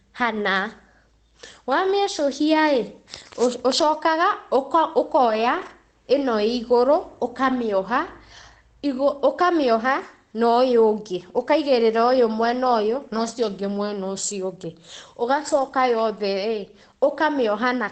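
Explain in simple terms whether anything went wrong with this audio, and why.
Brief stretches at 3.77–3.83 s, 5.21–5.71 s, 7.47–7.61 s and 15.47–15.73 s sound rougher and noisier: each is a lost packet rebuilt from error correction, a coarse backup copy filling the gap without silence.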